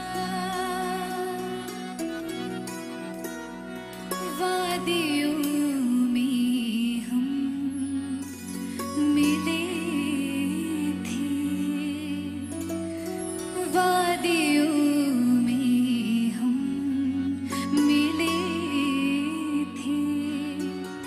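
From 14.51 s to the end, channel delay (comb filtering) sets in: one channel lags about a sample, so summing cancels highs near 20 kHz, slightly dulling the top.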